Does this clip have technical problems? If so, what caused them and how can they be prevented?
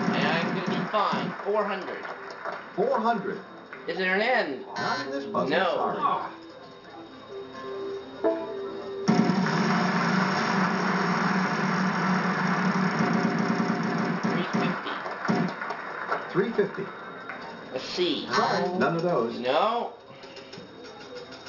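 Yes. Gritty, metallic tones run throughout, with the spectrum piled against 6 kHz. This is aliasing from a rate drop, likely 48 kHz to 12 kHz, without low-pass filtering. Applying an anti-aliasing filter below the new Nyquist frequency before resampling prevents it.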